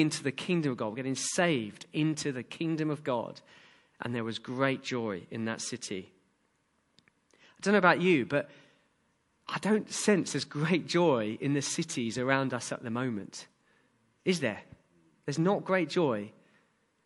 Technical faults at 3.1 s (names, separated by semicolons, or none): MP3 compression